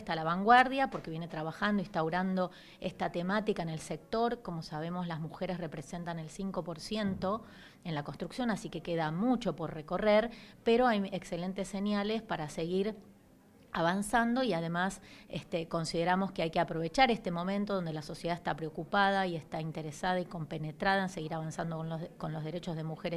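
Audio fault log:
Nothing to log here; no faults turned up anywhere in this clip.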